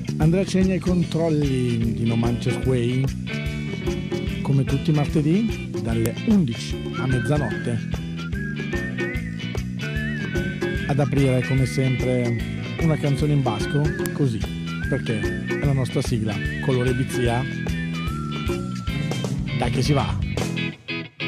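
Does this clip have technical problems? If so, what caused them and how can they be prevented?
Yes. Sharp, loud clicks land at 6.06 s and 14.06 s, exactly 8 s apart, regardless of the surrounding audio. This is a file header played as audio: WAV pieces were joined without stripping headers, so header bytes play as samples. Strip headers before concatenating or streaming.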